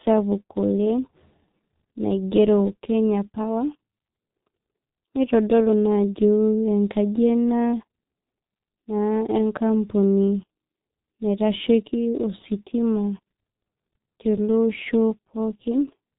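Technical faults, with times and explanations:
Throughout, G.723.1 codec: the speech is band-limited below 4 kHz and sounds muffled and hoarse, with smeared consonants. The heavy damage fits a very low bitrate near 6 kbit/s, where a slowly updated vocal model, rebuilt every 30 ms frame, cannot follow rapid articulation.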